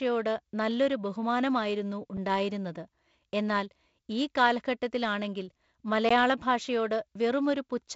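An output buffer that wasn't filled in time most likely caused the block of digital silence at 2.17 s, about 5 ms, and again at 6.09 s, about 15 ms. Samples drop abruptly to zero and back, so the first is a tick and the second a tiny audible hole. The speech carries G.722 wideband band-limiting, with nothing above about 7.7 kHz.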